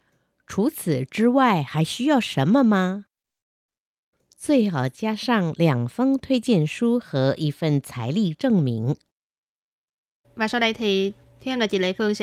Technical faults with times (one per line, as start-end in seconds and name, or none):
3.21-3.26 short stall from a late packet
3.40-3.81 call audio freeze
9.03-12.09 jitter buffer speed-up